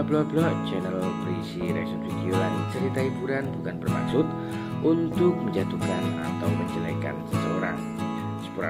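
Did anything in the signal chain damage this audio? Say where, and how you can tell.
No, nothing along the chain left a mark I can hear, so there's no damaged stage to point to here.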